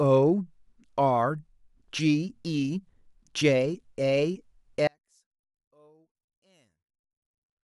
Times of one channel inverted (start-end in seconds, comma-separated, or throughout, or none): 4.87-7.64